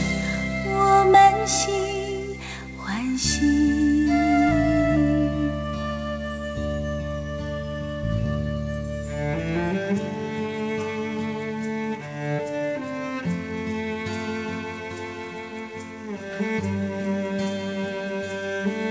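No technical faults are audible; the sound has come over a call link whose codec passes nothing above 8 kHz, which fits a G.722 wideband connection working as intended.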